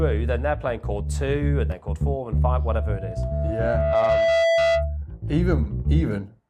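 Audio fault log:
2.73–4.97 s, loudspeaker feedback squeal: a single tone near 663 Hz swells over roughly a second and a half to sit about 5 dB above the sound, as the microphone picks up its own loudspeaker and that frequency keeps reinforcing itself; unlike a steady hum or whistle, it grows from nothing.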